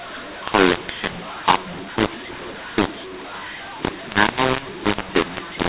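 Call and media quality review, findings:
mu-law and A-law mixed up, throughout clip: harsh, gritty distortion on speech, pauses filled with hiss instead of silence. G.711 decode stage, likely A-law stream read with mu-law tables. Waveform: scrambled amplitudes, quiet gaps lifted off zero. Spectrogram: broadband noise smeared across gaps, all energy capped near 4 kHz, consistent with 8 kHz G.711 telephone coding.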